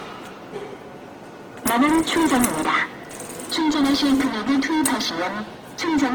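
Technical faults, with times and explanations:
Throughout, Opus compression: tones sound grainy and noisy, likely from Opus music mode at a rate that fits 16 kbps; the spectrogram shows noise-filled bands up to 20.3 kHz.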